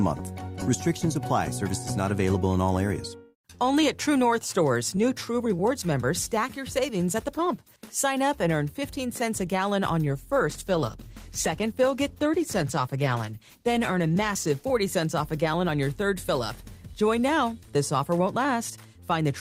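From 10.08 s to 14.79 s there is a call bitrate drop. The sound turns rough and watery, its top end dulls, and this degraded quality holds for about 4.6 s before clarity returns. This fits the encoder being pushed from around 48 kbps down to about 14 kbps and coding more coarsely, with the highs trimmed. Packet loss would leave gaps or glitches. This is continuous, unbroken audio that is uniformly degraded.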